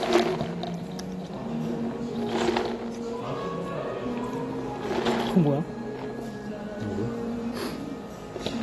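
From start to finish the whole clip carries AAC compression damage, and it's plainly audible. Nothing reaches above 12.1 kHz, so the top end sounds dull and closed in, and sustained parts have a smeared, warbly, fizzy texture. That's likely an AAC-LC encode at a low bitrate, around 32 kbps to judge by the sound. The encoder drops the highs and thins out detail it can't afford to keep.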